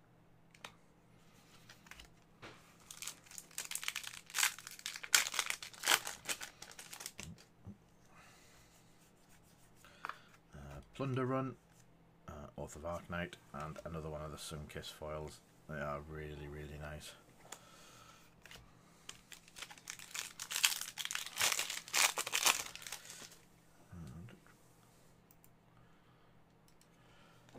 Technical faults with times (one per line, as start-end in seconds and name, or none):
none